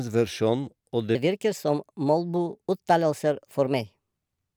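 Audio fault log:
1.15–4.56 s, section at the wrong speed: from 1.15 s to the end, the speech runs 1.25 times faster than it was recorded, so pace and pitch rise together and the voice turns hurried and lifts by roughly four semitones. Because speed and pitch move as one, this is a resampling shift rather than time-stretching. The likely cause is this stretch being played or rendered against the wrong clock rate, as when a sample-rate mismatch goes uncorrected.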